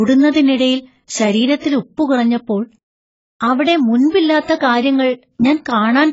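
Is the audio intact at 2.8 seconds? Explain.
No. At 2.8 s, like the whole clip, the speech carries AAC compression damage, likely from a very low bitrate around 16 kbps. The encoder has thinned the spectrum, so nothing survives above 7.6 kHz, and sibilants come out dull, smeared and warbly.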